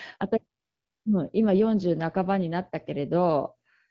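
From 0.59 s to 1.05 s, AMR comfort noise takes over for about 460 ms. The sender judged the talker silent and stopped sending speech frames, so the receiver filled the gap with synthetic noise built from a rough estimate of the background's level and spectral shape. It sounds like a steady, smooth hiss switching in and out. On a spectrogram it forms a flat, textureless band with abrupt edges; the waveform shows uniform low-level noise. Elsewhere the wideband HD Voice path keeps speech clear, with only light coding damage.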